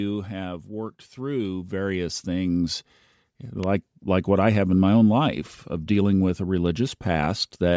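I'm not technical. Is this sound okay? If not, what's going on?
No, there are a few problems, all in the first four seconds.

From 0.05 to 0.71 seconds there is automatic gain falling. The recording system has a built-in volume control that adjusts itself. Here it decided the start was too loud or its background noise too strong. So it turned the level down, slowly, over about two-thirds of a second. The speech and the background noise behind it both get a little quieter together. The drop is small.

Right after, from 0.68 to 2.85 seconds, comes automatic gain rising. Now the same volume control swings the other way. It judged the sound too quiet and turned it back up. This time the change is much bigger and takes about two seconds. The speech and the background swell up together, like someone slowly turning a knob.

At 3.63 seconds there is an electrical switching spike. It is a sharp snap or a tight cluster of clicks, over in a thousandth of a second, sitting on top of the sound. 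It is not part of what the person is saying. The likely cause is a nearby switch, motor or spark of static that the audio line picked up. It is brief.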